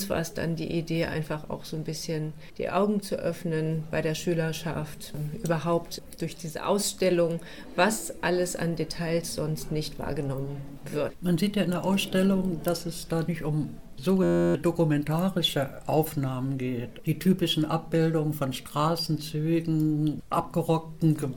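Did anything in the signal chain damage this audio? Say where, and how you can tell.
Yes: a system hang loop at the driver or buffer stage, 14.23 to 14.55 s. An 11.6 ms slice repeats exactly, giving a steady 86 Hz buzz rather than silence, which fits a 512-sample buffer.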